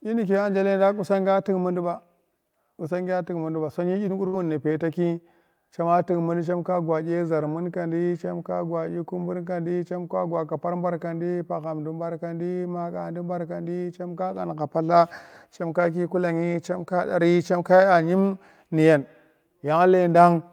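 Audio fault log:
4.27 to 4.35 s, burst of packet loss: the sound just before the gap is briefly drawn out and fades for about 54 ms instead of moving on, then the audio picks up again with a small jump where roughly 60 ms of speech never arrives. A short run of consecutive packets was lost or arrived too late to play, so the receiver bridged the hole by extending and attenuating the last sound it had, then resumed further along.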